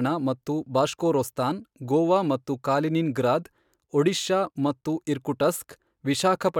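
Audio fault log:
No fault to log.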